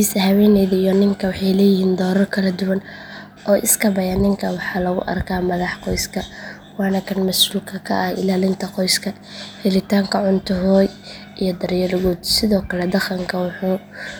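No technical faults are audible.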